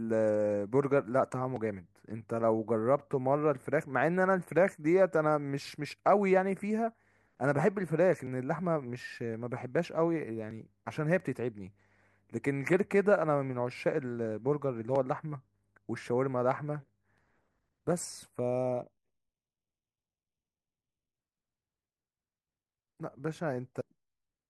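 Channel delay (comb filtering) affects the speech from 18.40 to 21.16 s. One channel runs late by roughly a third of a millisecond, so when the two are combined to mono, content common to both cancels at evenly spaced frequencies, the first near 1.5 kHz and further notches above it at regular intervals. Through this stretch the voice turns hollow and phasey, with a fixed coloration that disappears after 21.16 s.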